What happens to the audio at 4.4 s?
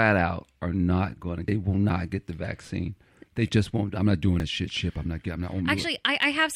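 At 4.4 s, between "won't I'm not doing" and "that shit", the speech jumps forward, losing a few tens of milliseconds. The likely cause is a dropped buffer (overrun), with the two sides spliced directly. Unlike a dropout, no silent gap is heard.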